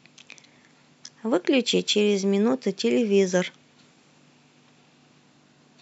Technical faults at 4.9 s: none

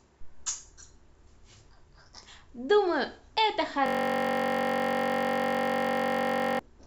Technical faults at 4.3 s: system hang loop

